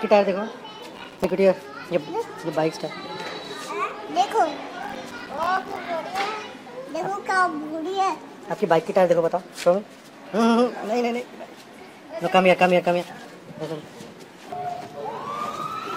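From 0.96 to 1.31 s, and again from 4.83 to 5.86 s, the processor falls behind on its small audio buffers, each only a few milliseconds long, and misses deadline after deadline. Every miss drops in a tiny gap of silence with hard edges, so the sound breaks into rapid clicks, heard as processor overload crackle, a gritty tearing laid over the audio. The second burst lasts about three times as long as the first.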